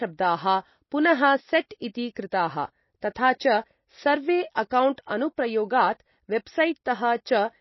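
Across the whole speech clip, the sound is dull and watery. Nothing is heard above about 5.8 kHz. Faint tones flicker in and out, and s sounds turn swirly. This is likely MP3 compression, fitting a low bitrate near 24 kbps that forced treble cut-off and dropped detail.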